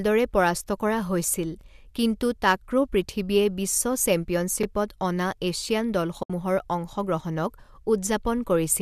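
A short stutter breaks the speech at 1.61–1.63 s and again at 4.63–4.66 s, where about 23 ms of sound plays twice. These are overlapping chunks: the audio was handled in 3-second pieces, and each piece began slightly before the previous one ended, so the joins repeat a sliver.

At 6.23–6.30 s the speech fades into a soft-edged gap of about 70 ms. This is AAC frame loss with muting. The decoder zeroed the missing frames, and the overlapping windows smoothed the edges. The gap's length suggests roughly seven lost frames, and the light roughness underneath is likely from low-delay AAC-ELD coding at around 64 kbps.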